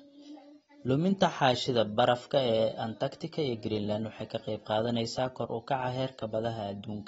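From start to finish the speech is band-limited, with nothing above 7.7 kHz, and it sounds dull and smeared, with a fizzy, warbling texture on sibilants. This is plainly audible AAC compression damage, likely from AAC-LC at a low bitrate around 27 kbps.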